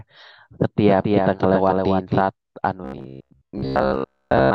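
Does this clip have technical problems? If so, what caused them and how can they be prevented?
Yes. From 0.87 to 2.21 s there's a doubled audio track: a second full-band copy, about 5 dB quieter, trails around 300 ms behind with no room tail and starts and stops abruptly. This is likely a second, slower capture path mixed in. Muting or unrouting that duplicate source prevents it.

From 2.85 s to the end, the speech turns robotic from repeated short buffers. A rigid metallic buzz at 66.8 Hz fits a block of about 15 ms being looped while most of the real audio is skipped. The likely cause is audio arriving too seldom, so larger buffers or a lighter CPU load would prevent it.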